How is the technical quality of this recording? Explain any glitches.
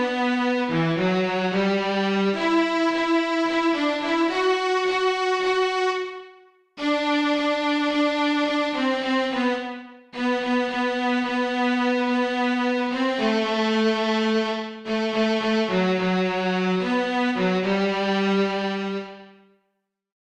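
The technical quality of the recording is sound, with no glitches to explain.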